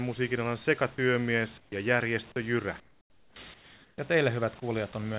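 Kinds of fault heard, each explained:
Comfort noise in place of the background: the pauses at 1.58, 2.8 and 3.54 s turn smoother and about 6 to 16 dB quieter, likely synthetic fill from discontinuous transmission.
Onset clipped by the voice detector: at 1.7 s the sound resumes abruptly, missing its first 20 ms, likely because the detector reacted late and comfort noise filled the gap.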